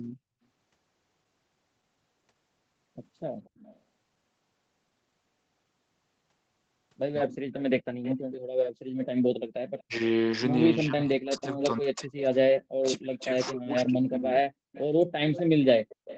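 At 3.44 to 3.79 s there's an echo leak: a faint copy of the speech, about 30 dB down, trailing 239 ms behind. It's likely a far-end loudspeaker whose echo canceller didn't fully scrub what its microphone picked up, so the leftover got sent back.

Around 7.28 to 7.4 s the speech briefly sags by roughly 20 dB for about a tenth of a second. That's speech suppressed in double talk, with both sides likely talking at once and the canceller turning everything down.

From 7.56 to 9.83 s the echo leak returns much louder, only about 15 dB under the speech and still at 239 ms.

Inside that stretch, at 8.69 to 8.96 s, you get background gated by the echo canceller. The room tone drops out hard, about 40 dB, for around 0.3 s while the canceller clamps the microphone, then it comes back.

From 9.84 to 15.26 s the double-talk suppression gets heavy. The speech repeatedly ducks or cuts out in pieces, at times by as much as 40 dB, for roughly three seconds in total.

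Overlapping that suppression, the echo leaks through again at 11.41 to 12.21 s, around 20 dB down. From 13.2 s to the end it's back to about 15 dB down, with the same 239 ms lag.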